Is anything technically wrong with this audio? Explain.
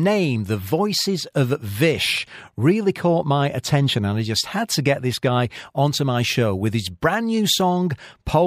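No, nothing technically wrong stood out on listening to this speech recording.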